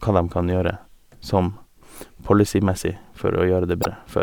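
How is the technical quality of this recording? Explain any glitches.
One glitch mars the speech near the end. From 3.80 to 3.86 s there is damaged data in the compressed stream. Corrupted bytes make the decoder misread those frames and lose sync. It then hunts for the next valid frame header, producing a brief chirp, squawk, click or short hole.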